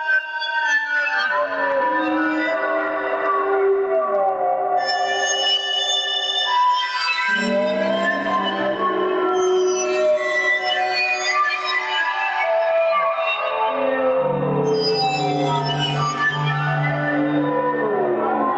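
Non-speech sound runs through a call chain and shows gain pumping from start to finish. The level ducks by around 10 dB each time a loud sound arrives, so loud and quiet passages sit unnaturally close in level and the whole clip sounds squashed. The likely cause is input gain set far too high for the microphone, with a fast limiter or compressor clamping down on each peak. Nothing reaches above 8 kHz, as expected from the call's Opus path at 32 kbps.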